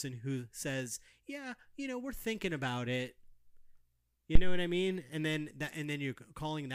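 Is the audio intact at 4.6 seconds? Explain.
No. At 4.6 seconds the speech sits inside a phantom power thump running from 4.35 to 4.72 s: a supply switched on or off on the live input sent a DC step through the coupling capacitors. It peaks near -9 dBFS and has a clean 82 ms exponential decay, unlike the irregular rattle of a cable knock.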